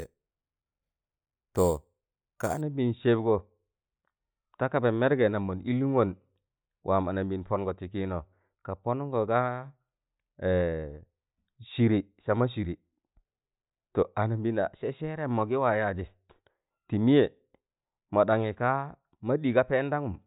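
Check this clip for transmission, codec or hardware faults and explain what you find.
One fault, confined to the start. From 0.00 to 2.61 s, a bright metallic fizz tracks the speech at about 19 dB below it. This is imaging from sample-and-hold upsampling: unsmoothed repeated samples, fitting 8 kHz raised to 44.1 kHz, mirror the spectrum into 4 to 8 kHz.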